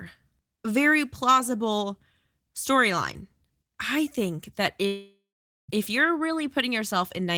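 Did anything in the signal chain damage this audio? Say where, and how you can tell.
Yes. The network stage likely caused a long network dropout from 4.87 to 5.70 s. After "storyline I think that", the receiver stretches the last sound into a fading buzz, then 0.48 s of silence. Speech resumes at "if you're" with 0.82 s lost.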